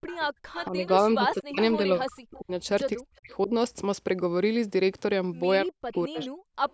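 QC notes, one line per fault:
0.00–0.41 s, background gated by the echo canceller: while the far end played through the loudspeaker, the canceller clamped the microphone hard, so the room sound drops away by as much as about 40 dB for roughly 150 ms in total before recovering once the canceller releases.
0.06–0.90 s, 5.93–6.25 s and 6.69 s to the end, echo leak: a delayed copy of the sound arrives 228 ms behind the original, roughly 15 dB below the speech at first, then about 20 dB and finally about 35 dB down, likely residue the far end's echo canceller failed to remove from its loudspeaker pickup.
0.69–2.52 s, 2.96–3.51 s and 5.64–6.47 s, speech suppressed in double talk: the talker's speech dips by up to about 40 dB or breaks up in pieces, roughly 1.5 s, 0.4 s and 0.5 s affected in each stretch, likely because both sides spoke at once and the canceller attenuated everything.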